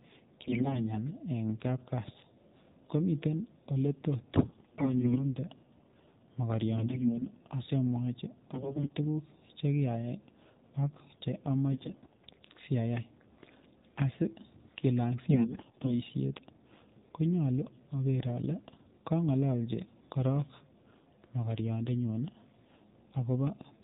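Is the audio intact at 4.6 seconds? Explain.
No. From 4.34 to 5.35 s the sound shows AMR bit errors: with roughly a tenth of the weakly protected bits flipped, the pulse positions and fine gain and spectral values decode wrongly. Pitch and level hold, but the sound turns hoarse, scratchy and gargly. A lost frame would instead give dropouts or smeared repeats. Underneath, the AMR narrowband mobile codec at 7.4 kbps stops everything above 4 kHz and adds a buzzy, synthetic coarseness that stays steady rather than bursting into harshness.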